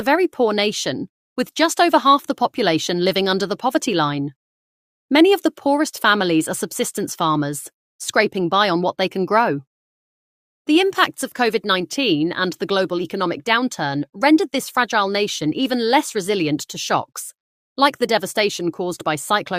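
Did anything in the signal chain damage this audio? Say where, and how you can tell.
No, nothing in the signal chain audibly damaged this audio.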